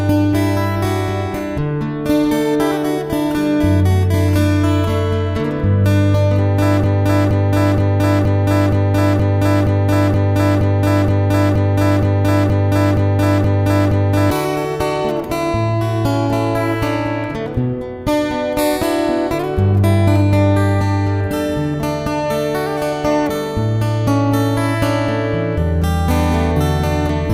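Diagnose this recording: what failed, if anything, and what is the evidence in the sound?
Broken-record loop from 6.84 s to 14.31 s: a 0.47 s fragment repeats exactly, back to back, 16 times, and the audio due in that span never arrives. The likely cause is a stalled playback or stream buffer that kept resending its last fragment.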